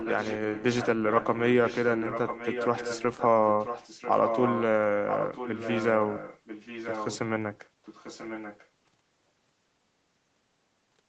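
This speech clip carries an echo leak. A delayed copy of the speech trails the main sound by about 0.99 s. It appears from 0.0 to 0.88 s, 1.09 to 3.26 s, 3.47 to 4.63 s, 5.08 to 7.19 s and 7.85 to 8.68 s. It sits roughly 10 dB down, rising to about 5 dB down at 3.47 s and fading to about 15 dB down at 7.85 s. The likely cause is a far-end loudspeaker whose echo canceller let its microphone pickup return.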